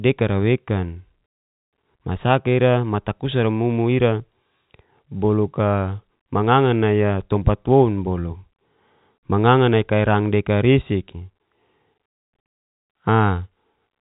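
No technical faults heard.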